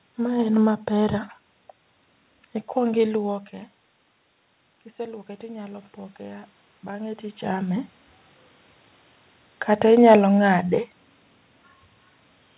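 From 4.95 s to 7.91 s, automatic gain rising is audible. The talker's level at the microphone has dropped by about 14 dB, likely from the talker moving back around this time. The automatic gain control answers by lifting its gain slowly, by about 6 dB over those three seconds. The voice and the room noise swell up together. The lift only partly restores the lost level, so the speech stays quieter than before while the background grows.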